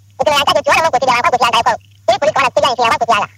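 Throughout, the audio runs twice as fast and a full octave high, 12 semitones up. This is a wrong sample rate: 24 kHz material played back at 48 kHz.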